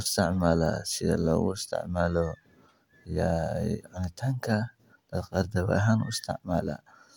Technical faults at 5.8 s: none

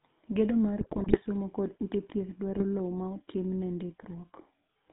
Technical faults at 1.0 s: GSM full-rate codec; GSM bit errors

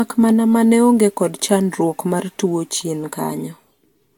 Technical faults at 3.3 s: generation loss

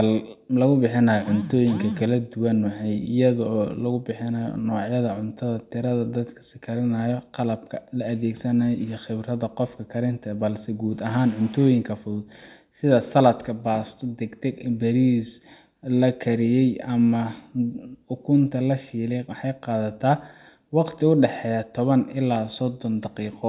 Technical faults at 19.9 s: none

